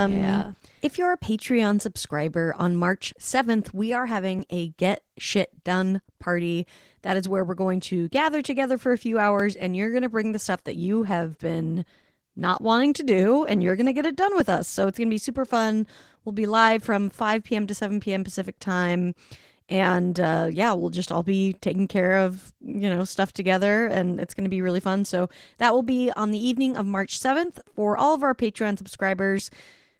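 From the start, the speech carries plainly audible Opus voice compression damage. The voice has a coarse, hoarse, slightly robotic texture because the excitation is coded with few bits. The sound points to hybrid mode at a low rate, consistent with about 16 kbps in 20 ms frames: linear-prediction coding handles the lower band, and a thin transform layer fills the range above 8 kHz. That keeps the band full but leaves the top end sparse.

Starting at 4.39 s, just after "we are", a short click recurs every 5.0 s through 29.39 s. The regular interval points to clock drift buffer slips, likely caused by two devices running on separate clocks roughly 300 ppm apart. The buffer between them slowly drifts until a block of about 70 samples is dropped or repeated, and each such jump in the waveform is heard as a click.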